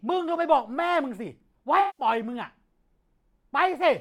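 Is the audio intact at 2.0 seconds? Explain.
No. From 1.80 to 2.05 s the speech turns smeared and noisy, an AAC frame loss with concealment: about 170 ms of missing data, fitting roughly eight frames, rebuilt from the last good spectrum.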